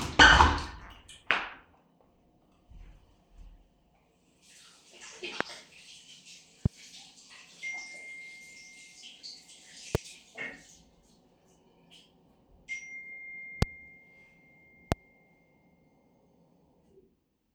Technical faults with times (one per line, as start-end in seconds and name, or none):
5.41-5.43 loud pop
6.66-6.68 loud pop
9.95-9.97 loud pop
13.62-13.65 loud pop
14.92-14.94 loud pop